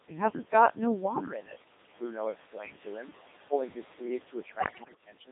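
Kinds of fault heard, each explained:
noise suppressor artifacts: The suppressor pulls the room noise down by about 18 dB between phrases, so the background pumps.
Codec 2 vocoder: Speech is rebuilt from pitch, voicing, energy and envelope, buzzy and robotic throughout, squeezed into 200 Hz to 3.7 kHz at 2.4 kbit/s.
speech cut by the noise suppressor: From 2.37 to 2.64 s the suppressor mistakes speech for noise and dips it by up to about 19 dB, so it sounds swallowed.
bit errors on digital voice radio: From 4.60 to 5.02 s corrupted frames hit the vocoder, and pitch, level and tone lurch into bleeps, warbles and robotic gibberish.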